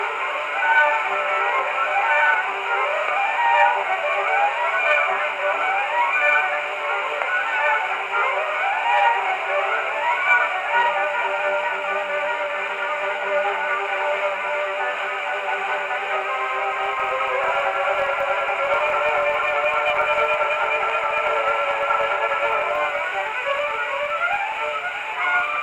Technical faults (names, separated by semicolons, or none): filter restarted on every block